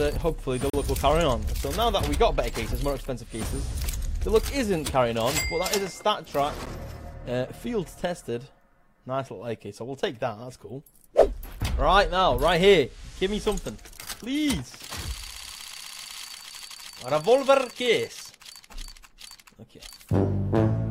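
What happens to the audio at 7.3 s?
Nothing goes wrong at 7.3 s; the audio plays through that moment intact, with no dropout, click, distortion or other fault.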